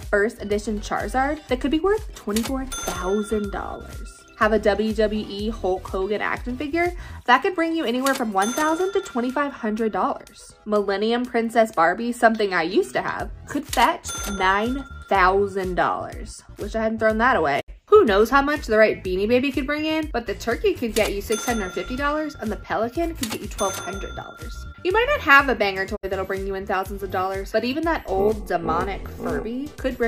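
A digital broadcast dropout hits the audio twice. The first comes at 17.60 s and the second at 25.95 s. Each time the sound fades out over about 20 ms and goes silent. It returns about 0.1 s after the cut began. The receiver muted because frames failed to decode, then resumed when good frames arrived. Each gap swallows roughly 64 ms of programme, which fits two lost frames. That material is gone.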